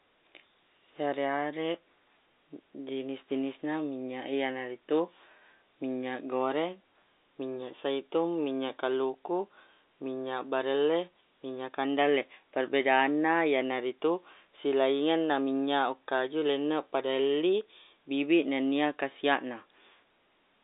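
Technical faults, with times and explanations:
No technical faults can be heard in the recording. The speech comes over a G.711 telephone path, confined to roughly 250 Hz to 3.7 kHz with nothing above 3.8 kHz, which fits 64 kbps A-law coding.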